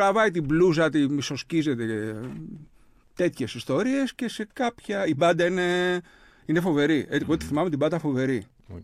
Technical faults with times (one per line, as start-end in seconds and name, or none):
0.00-8.84 Wi-Fi interference